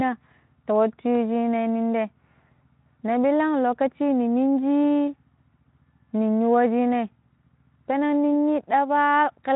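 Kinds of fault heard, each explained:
Nothing here stands out as a fault, so there's no kind of fault to list for this speech.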